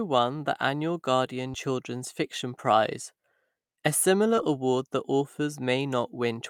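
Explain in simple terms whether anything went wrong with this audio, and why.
Two short concealed packet losses, at 1.51 to 1.56 s and 4.36 to 4.39 s. About 20 ms of speech went missing each time. The receiver patched each gap by stretching the previous sound, leaving a brief smear.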